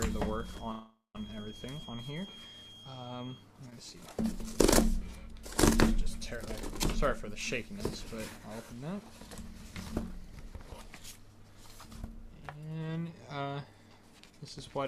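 From the start to 3.48 s, a feedback whistle sits about 20 dB below the sound, a thin steady tone at 3.3 kHz that swells and fades slowly in level. The likely cause is a loudspeaker-to-microphone loop held just at the edge of feedback, ringing at one frequency without building up.

Between 0.71 and 1.18 s there is a call audio freeze. Packets held up in transit likely emptied the jitter buffer, so the receiver fills 0.43 s by extending the last sound as a fading buzz or hiss, including about 0.17 s of silence. The audio then resumes where it stopped, with nothing lost.

From 3.70 to 3.74 s, a short stall from a late packet occurs. One packet missed its slot and the buffer briefly ran dry, so the receiver stretched the preceding sound by 16 ms before continuing. Nothing is lost, but the sound is held slightly too long.

From 12.53 to 13.65 s, a jitter buffer speed-up trims the backlog. The buffer had grown beyond its target, so the receiver repeatedly removed tiny pitch-period slices, around 150 ms in total. 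The audio runs at 112% speed with its pitch unchanged and sounds hurried.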